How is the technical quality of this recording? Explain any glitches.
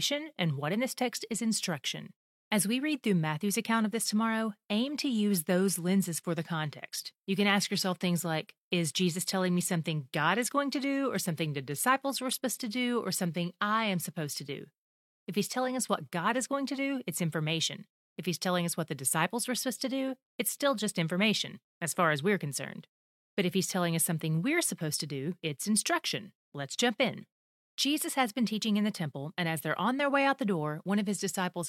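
The recording has one clear problem: a stretch where the quality drops and then comes back.

From 3.62 s to 15.62 s, about 12 seconds, you're hearing an adaptive stream at a lower bitrate. The connection dipped, so the player switched to a leaner version and then switched back. Codec artefacts rise during that stretch. That fits a drop from roughly 96 kbit/s AAC to a 40 kbit/s HE-AAC stream. The changes are abrupt, with no gap.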